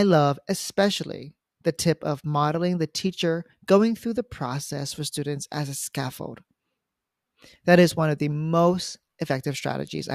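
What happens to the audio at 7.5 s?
Nothing goes wrong at 7.5 s; the speech carries on intact through that moment.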